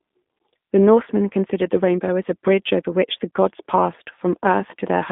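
From start to finish the speech carries G.729 codec damage, consistent with the 8 kbit/s G.729A variant. The encoder keeps only a vocal tract filter, a pitch predictor and a sparse pulse excitation for each frame, so the voice comes back rebuilt rather than copied. It sounds plainly rough and slightly synthetic, with a buzzy, thin texture. The line band runs from about 200 Hz to 3.6 kHz, leaving it dull and narrow.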